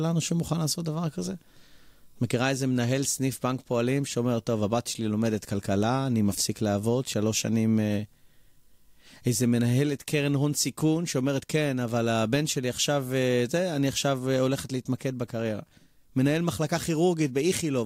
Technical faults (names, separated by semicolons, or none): none